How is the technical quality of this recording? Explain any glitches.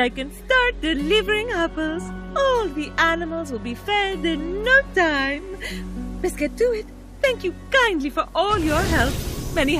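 The technical quality of this recording is sound, with no glitches to explain.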